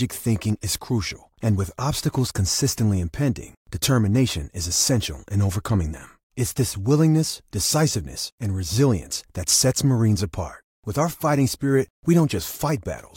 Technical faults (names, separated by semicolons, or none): dropped samples